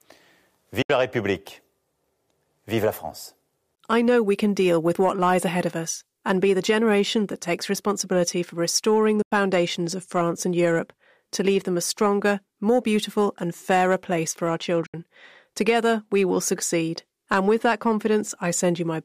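Speech with three short gaps of silence at 0.82 to 0.90 s, 9.22 to 9.32 s and 14.86 to 14.94 s, lasting about 70, 93 and 70 ms. These are likely Bluetooth dropouts, where late packets were discarded, which fits three or four packets lost each time. On a waveform they are flat holes, and on a spectrogram they are blank vertical bands before the sound carries on. Single sharp clicks at 7.70 s and 12.69 s point to dropped samples, a tiny fraction of a millisecond missing. The waveform jumps abruptly, and each click appears as a thin vertical line across the spectrum.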